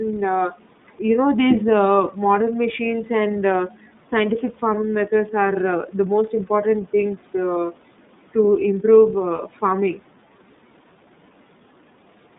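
The whole clip is carried by the iLBC codec. Nothing passes below 150 Hz or above 3.7 kHz. Each 30 ms frame is coded on its own. The sound is rough and faintly synthetic, with plainly audible coding damage. This fits the 13.33 kbps mode.

From 3.68 to 3.86 s, the speech is cut by the noise suppressor. It mistook part of the speech for noise and turned it down, by about 12 dB at the deepest. About a tenth of a second sounds swallowed. This falls between "uh modern machines and" and "scientific farming methods are".

From 9.36 to 9.40 s, just after "things to to improve", there are lost iLBC frames. The 30 ms gap points to a single lost frame. The decoder repeats the last pitch cycle with noise, heard as a brief, slightly buzzy held sound. The room noise, about 22 dB below the speech, is part of the recording.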